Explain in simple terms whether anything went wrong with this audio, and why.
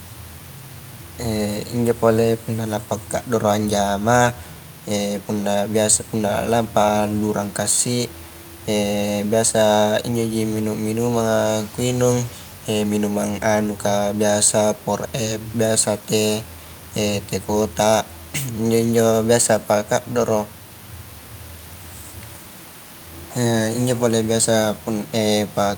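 Nothing went wrong that I could hear; the only extra sound is a quiet background noise from the room, which sits well beneath the speaking voice and is just part of where it was recorded.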